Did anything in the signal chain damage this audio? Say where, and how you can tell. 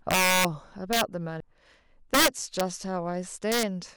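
Yes. Integer overflow at the sample-format or gain stage: harsh sign-flipping cracks at 0.11–0.45, 0.93–1.01, 2.14–2.61 and 3.52–3.63 s, where peaks exceed full scale by about 2 to 5 dB and wrap.

A CD skip in playback at 1.40 s: a tick and a very brief mute, then the speech resumes from a different point on the disc's spiral.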